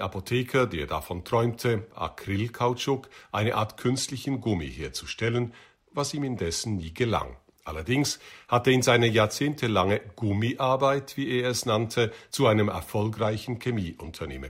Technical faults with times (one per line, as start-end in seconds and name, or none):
3.63-7.11 Bluetooth SBC bit pool drop
13.20-14.34 Bluetooth SBC bit pool drop